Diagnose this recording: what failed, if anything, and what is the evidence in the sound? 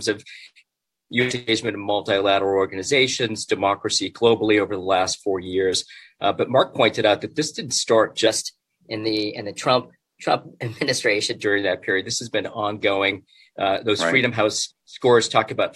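A wrong sample rate runs from 8.27 to 11.43 s, at the playback stage: the sound there is about 1.09 times faster and roughly one and a half semitones higher, with tempo and pitch shifting together. That locked ratio shows the samples were clocked out faster than they were captured, with no rate conversion. The factor fits 44.1 kHz material played at 48 kHz.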